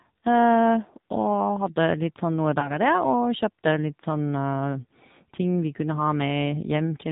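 From start to finish, the speech carries the sound of the AMR narrowband mobile codec. Nothing above 4 kHz survives, so the top end is gone. Each 20 ms frame is rebuilt from a vocal tract model and a few pulses. The damage is plainly audible. Voices turn buzzy and synthetic, and the texture fits the codec's 7.4 kbps mode. Fine detail is traded away to save bits.

Just after "sånn noe", from 2.60 to 2.79 s, there are lost AMR speech frames. The gap points to a single 20 ms frame that failed on the radio link. The decoder filled it by repeating the last good pitch and vocal tract settings at reduced gain. This is heard as a brief dip and warble. The speech then returns rough for a moment before it settles.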